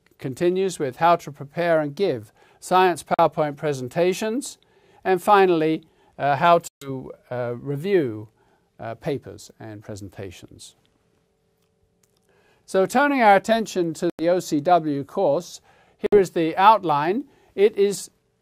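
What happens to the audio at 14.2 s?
Right around there, from 14.10 to 14.23 s, the sound cuts out into a hole of about 0.13 s, then picks up further along as though it had kept playing underneath. That's likely a Bluetooth dropout, where packets arrived too late for the headphones and were thrown away.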